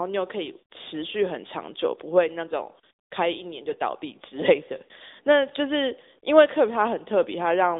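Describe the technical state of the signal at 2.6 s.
At 2.6 s the speech carries AMR narrowband mobile codec damage, present across the whole clip. Nothing passes above 3.7 kHz or below about 300 Hz, and vocal-tract modelling leaves a plainly audible buzzy, synthetic edge, which points to a mid-rate mode near 10 kbps.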